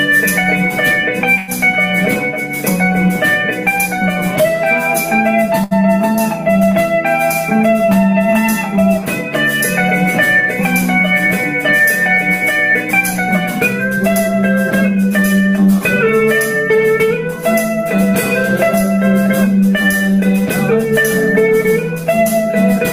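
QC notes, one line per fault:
1.37–1.50 s, call audio freeze: the sound is held as a fading buzz or hiss for about 105 ms, likely because packets were delayed and the jitter buffer emptied, then resumes unchanged.
5.64–5.73 s, short stall from a late packet: a late packet left the jitter buffer empty, so the last sound is stretched about 70 ms with a slight buzz or dip, nothing lost.
13.96–14.43 s and 14.88–15.18 s, jitter buffer speed-up: to cut excess buffered delay, short pitch-period pieces are dropped, playing about 10% fast at the same pitch. Roughly 50 ms and 40 ms are trimmed, sounding hurried.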